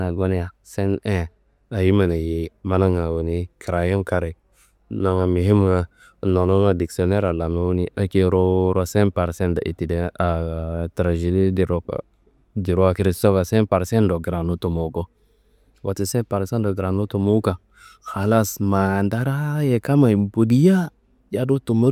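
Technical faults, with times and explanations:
No technical faults can be heard anywhere in this recording.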